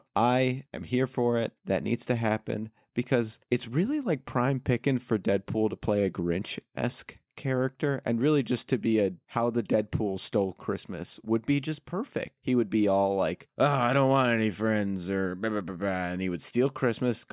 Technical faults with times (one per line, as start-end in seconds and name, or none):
none